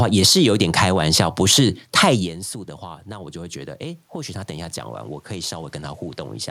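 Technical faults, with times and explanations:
2.13 to 4.56 s, automatic gain rising: just after the talker moves away from the microphone, around 2 s, the input falls by about 17 dB. The automatic gain control hears a level that is too low and slowly raises its gain, here by about 4 dB over roughly two and a half seconds. The voice and the room noise swell together, and that shared rise is how you know the gain moved and not the talker. On the waveform the envelope climbs gradually, and the noise floor between syllables lifts with it.
4.89 to 6.51 s, Bluetooth SBC bit pool drop: the link appears congested, and the bit pool falls from 31 to 14, which works out to about 99 kbps. With that few bits the highest sub-bands get little or nothing, and the lower ones are quantised coarsely. The treble dulls and a gritty, granular noise comes up under the speech until the clip ends. On a spectrogram the upper band turns patchy and then goes dark, and the remaining harmonics look speckled with quantisation noise.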